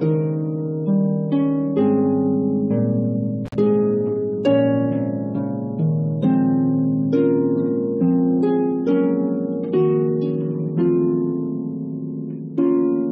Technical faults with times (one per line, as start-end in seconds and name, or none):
3.45-3.55 intermittent contact